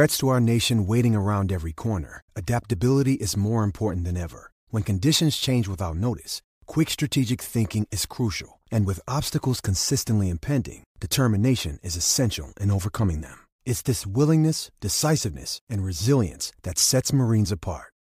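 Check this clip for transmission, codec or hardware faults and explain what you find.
Checking this clip turned up no faults to explain.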